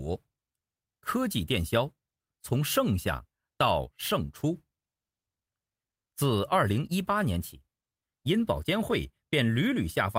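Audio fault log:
No faults are heard in the speech signal at any point.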